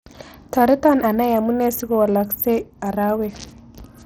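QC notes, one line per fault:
Throughout: Bluetooth SBC compression. The speech carries a gritty, grainy haze, with upper treble that thins and flickers, and nothing at all above about 18.7 kHz. This is likely the SBC codec running starved of bits, which fits a rate near 80 kbps. Its handful of wide sub-bands get crude bit allocation with no hearing model, so the weak top bands drop in and out while coarse quantisation and aliasing add the audible roughness.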